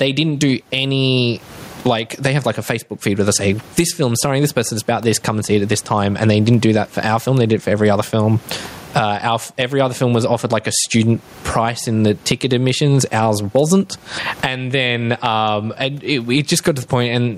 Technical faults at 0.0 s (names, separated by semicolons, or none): gain pumping